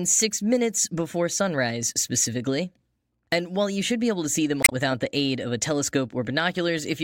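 From 4.61 to 4.73 s, just after "able to see them" and before "the aid of a", damaged data in the compressed stream garbles the decoded frames, and the decoder loses sync while hunting for a valid header. The result is a brief glitch replacing about 0.11 s of speech.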